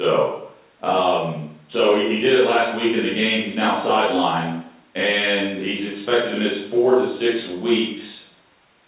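Nothing stood out on listening to this speech clip, which comes over a call path whose band stops at about 4 kHz, in keeping with a G.711 A-law connection.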